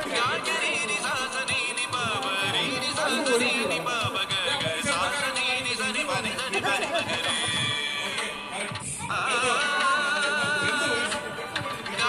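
No technical faults can be heard anywhere in the clip. Nothing in the audio points to a problem in how it was captured, processed or delivered.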